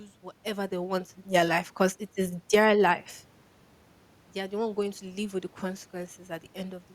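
From 0.05 s to 3.15 s, automatic gain rising lifts the level by about 4 dB. The gain control judged the input too quiet and slowly turned it up. Speech and room noise swell together, so even the background grows louder, unlike the talker moving near 0.5 s.

From 2.39 s to 2.70 s, automatic gain falling cuts the level by about 5 dB, inside that slow rise. The control judged the input too loud and pulled back. The sound starts loud, then sinks quickly along with its background, close to where the talker shifts around 2.5 s.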